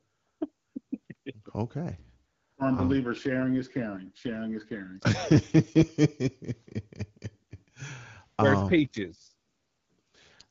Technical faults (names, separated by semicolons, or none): AMR rate drop